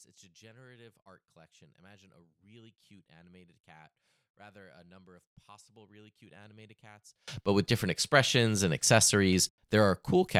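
From the start until 7.28 s, the speech is almost gone, about 30 dB down, leaving only a faint trace. The likely cause is one channel inverted, so the centred speech cancels in mono. Full level returns at "but with different expressions".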